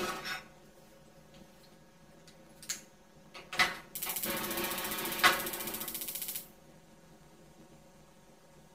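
Throughout this clip of sounds, planar audio is read as interleaved: each short block stores all its left samples followed by all its right samples, but playback takes them as alternating left-right pairs. Each block therefore plays twice at double speed, once per channel, keeping the overall pace intact. Because the blocks last only 10.88 ms, no octave shift is audible. Instead, a robotic buzz runs through the whole recording at the block rate of about 92 Hz.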